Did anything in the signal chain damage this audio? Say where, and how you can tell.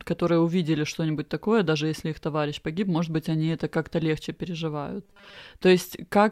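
Yes. From 5.05 to 5.38 s the speech collapses into a rigid, metallic buzz fixed at 200 Hz that only loosely tracks the syllables. This is robotic sound from repeated short buffers, and it likely arises at the driver or buffer stage. When fresh audio arrives late, the same roughly 5 ms block is replayed over and over, which imposes the 200 Hz pitch, while most of the real signal in that stretch is skipped.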